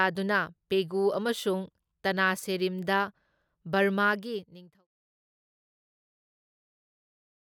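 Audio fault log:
No faults found in this audio.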